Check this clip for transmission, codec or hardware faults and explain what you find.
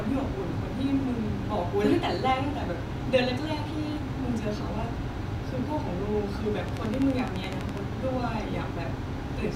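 One fault is audible: a train of clicks from 6.69 to 7.78 s. Sharp pulses of near-identical shape land on the speech at a steady 11.9 per second, about fifteen in all, peaking roughly 10 dB above the speech level. The cause is likely interference from nearby equipment or a faulty connection or power supply, injecting the same pulse repeatedly. It is heard as an even, rapid ticking laid over the speech for about a second.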